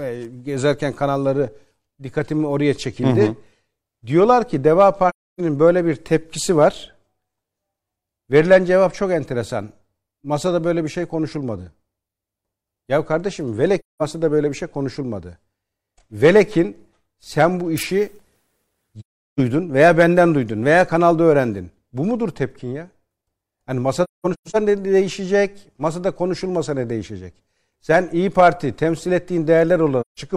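AAC frame loss with muting leaves soft-edged holes in the speech at 5.09 s (about 0.3 s, just before "böyle bir tepkisi var"), 13.79 s (about 0.21 s, before "böyle bir şey konuşulmadı"), 18.99 s (about 0.38 s, before "veya benden duydun veya"), 24.03 to 24.56 s (broken gaps, the longest around 0.2 s) and 30.01 s (about 0.17 s). Lost coded frames, roughly 43 ms each, were replaced with silence, and the overlapping windows fade each gap out and back in.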